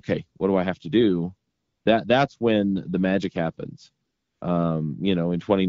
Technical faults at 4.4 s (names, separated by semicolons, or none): AMR comfort noise